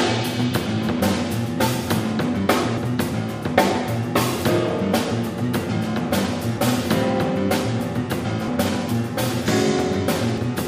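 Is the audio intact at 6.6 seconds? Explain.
No. At 6.58 s the sound skips abruptly: roughly a tenth of a second of audio is simply gone, and what came before is butted straight against what follows, with no gap of silence to mark the join. This is audio missing between chunks. The likely cause is a recorder or processor handling the signal in 2.0 s blocks and dropping a short stretch while it closes one block and starts the next.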